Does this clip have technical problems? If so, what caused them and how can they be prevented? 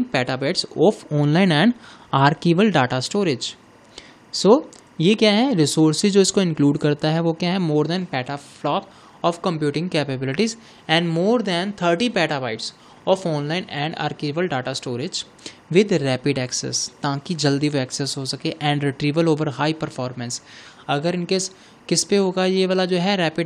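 Yes. Timecode bleed runs throughout: a faint chirping warble, roughly 35 dB below the sound, flipping between tones near 1 and 2 kHz. That is linear timecode leaking from an adjacent track or cable, and its rhythm fits 23.976 fps code. Unlike a steady electrical whine, it jumps between two pitches in a clocked pattern. Keep timecode on a separately shielded cable, away from the audio tracks.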